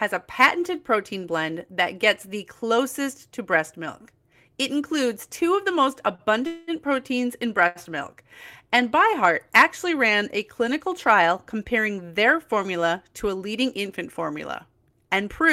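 A speech clip with three kinds of network playback fault. The first is a short stall from a late packet at 6.15 to 6.22 s. A packet missed its slot and the jitter buffer ran dry. The receiver held the last sound for about 34 ms until the packet came. Nothing is lost, but the sound hangs a moment with a faint buzz or dip. A second short stall follows at 7.67 to 7.78 s, between "proteins in" and "milk and". Here the held sound lasts about 80 ms, so the drag is longer. Between those two is a call audio freeze at 6.47 to 6.70 s. It falls after "two of the most" and before "proteins in". The playback stops advancing for about 207 ms. The last sound carries on as a buzzy, hissy fill that never drops to silence. Then the speech resumes where it left off. A longer hold-up of packets in transit is the likely cause. The stream is delayed, not cut. Later, from 11.96 to 12.66 s, comes a jitter buffer speed-up. 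It runs after "ran a clinical trial" and ends before "to a leading infant". The buffer had built up surplus audio. The receiver trimmed tiny pitch-period slices, roughly 50 ms in all. That stretch plays about 6% fast at unchanged pitch, so the phrase sounds slightly rushed.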